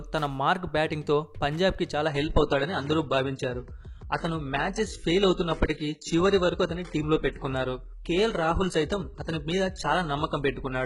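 At 2.08 s the audio switches abruptly, without a gap, to an adaptive stream at a lower bitrate. Everything above 11.1 kHz vanishes, and codec artefacts persist, suggesting a very low-bitrate HE-AAC stream.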